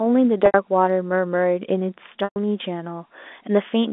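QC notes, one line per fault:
0.46 s and 2.24 s, packet loss with pitch repetition: gaps of 80 ms and 120 ms are bridged by repeating the last pitch period, a held buzzy tone that fades out within about 50 ms, then the speech cross-fades back. Unlike a plain dropout, the gap never cuts abruptly to silence.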